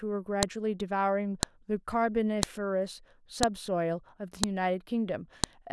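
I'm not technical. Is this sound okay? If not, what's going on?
No. A sharp click or snap cuts through the speech once a second, at 0.43, 1.43, 2.43, 3.43, 4.44 and 5.44 s. This is a file header played as audio: one-second pieces were joined with their start-up data left in, and that data plays as noise.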